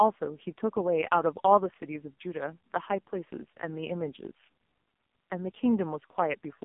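From start to finish the speech carries heavy AMR narrowband mobile codec damage. A sparse pulse-driven vocal-tract model makes it buzzy and synthetic, which fits the low 5.15 kbps mode. A spectrogram shows energy only between 200 Hz and 3.5 kHz, and nothing above 3.6 kHz.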